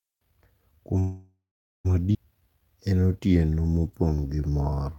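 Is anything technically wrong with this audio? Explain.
Yes. This speech clip has three network-related faults.

From 0.99 to 1.87 s there is a call audio freeze. The speech stops and the last sound carries on as a fading buzz or hiss. It then falls silent for about 0.45 s. The likely cause is packets held up in transit, so the jitter buffer ran empty. The receiver filled 852 ms while waiting. When the packets arrived, speech resumed where it stopped. Nothing was lost, but the delay grew by 852 ms.

At 2.13 to 2.16 s there is a skip ahead. Roughly half a second of speech is missing. Later audio was already queued, so a stretch was dropped and playback jumped forward. Only about 18 ms bridges the join. The two sides meet almost directly, and the built-up delay shrank by about half a second.

From 2.61 to 4.97 s there is a jitter buffer slow-down. The buffer was rebuilding its reserve. It repeated single pitch periods and small pieces of pauses, many times in a row. 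This added 379 ms, so the speech plays at about 84% speed. The pitch stays the same, but the sounds are audibly drawn out.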